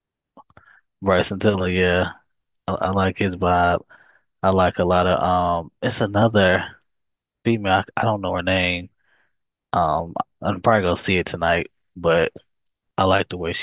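Nothing stood out on listening to this speech recording.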